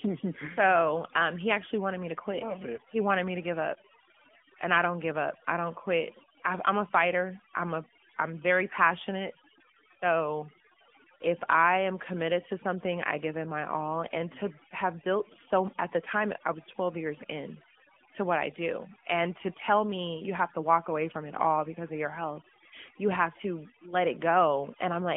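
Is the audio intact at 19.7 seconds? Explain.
No. At 19.7 seconds the speech is affected by overdone noise removal, which runs through the whole clip. The suppressor pulls individual frequency bands down or out wherever they sit close to its noise estimate, so quiet speech components vanish with the noise, leaving a near-silent background flecked with twinkling artefacts. The AMR narrowband mobile codec is also present throughout. It rebuilds the voice from a vocal-tract model excited by sparse pulses, passes roughly 200 Hz to 3.4 kHz with nothing above 3.5 kHz, and sounds plainly buzzy and synthetic, at a fairly high rate of around 10 kbps.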